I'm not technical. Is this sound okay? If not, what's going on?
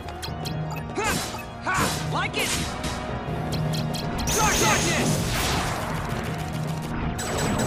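No. From 2.84 to 5.16 s everything is heard twice, a second copy just as loud trailing about a third of a second behind, then stopping abruptly. This doubled audio track is likely caused by the same sound being recorded twice through a slower second path.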